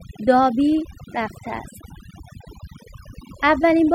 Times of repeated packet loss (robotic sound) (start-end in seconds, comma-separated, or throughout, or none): none